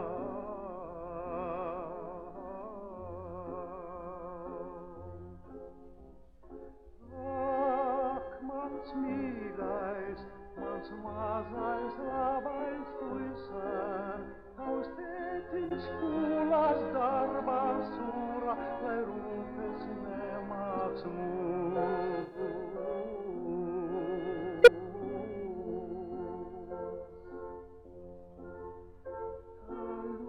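At 15.64 to 15.72 s, 22.21 to 22.40 s and 24.60 to 24.68 s there's a corrupt frame concealed: the decoder caught damaged AAC frames and papered over them, the middle one longest.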